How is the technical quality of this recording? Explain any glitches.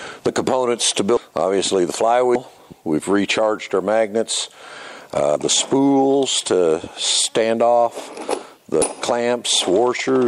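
The recording has four short glitches from damaged data in a compressed stream, at 1.17, 2.35, 5.36 and 8.82 seconds. Each is a tiny chirp or blip, only a few milliseconds long. Some bytes in the encoded file were corrupted, so the decoder couldn't read those frames properly, lost its place and had to find the next valid frame header. That brief garbled decode is the squawk you hear.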